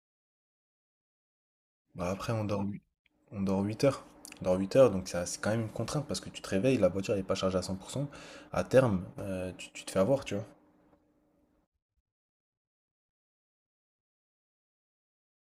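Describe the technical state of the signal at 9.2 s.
At 9.2 s the speech signal is intact, with no audible fault.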